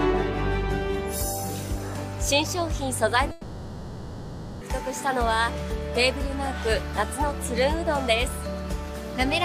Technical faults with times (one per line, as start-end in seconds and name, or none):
3.31-4.63 long network dropout